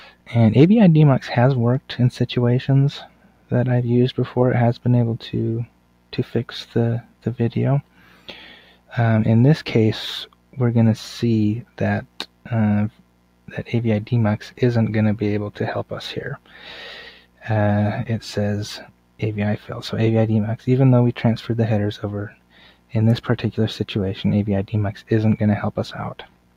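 Noise suppressor applied to music or sounds, throughout: a speech-oriented suppressor treats steady material as noise, so the level swings by around 10 dB and the sound pumps and thins. Sound cut by the noise suppressor at 0.0–0.29 s, 1.81–3.51 s, 5.66–14.59 s, 16.38–20.66 s, 22.3–22.94 s and 25.0–26.57 s: held and decaying passages sink by up to about 12 dB, tails shortened, with the longest stretch of dips in the 5.66–14.59 s span.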